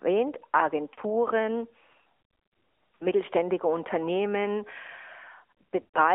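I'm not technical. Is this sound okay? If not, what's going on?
No. The call went through the AMR narrowband mobile codec, the old phone system that keeps only a thin slice of sound, roughly 250 Hz to 3.4 kHz, and rebuilds speech from a simple model. The voice sounds boxy, muffled and plainly buzzy from start to finish.

There are also lost AMR speech frames. Radio errors spoiled small chunks of the signal, so the phone patched the gaps by repeating the last good sound while fading it. At 0.94 s and at 2.96 s, each brief gap of about 40 ms causes a short dip or warble. At 5.82 to 5.97 s, a longer gap of about 120 ms makes the sound smear and fade out before it returns rough.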